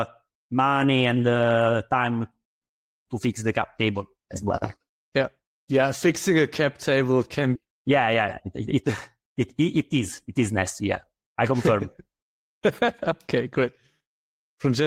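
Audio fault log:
7.55 to 7.57 s, skip ahead: right after "a cap table can" the speech jumps forward with no fill, losing about a second and a half. That stretch was dropped while later audio was already queued, so both sides butt together almost seamlessly.
7.66 to 12.37 s, jitter buffer speed-up: the speech runs about 6% fast at normal pitch and sounds a bit rushed. The buffer was holding more audio than it aims for, so it kept trimming tiny pitch-period slices, around a third of a second in total.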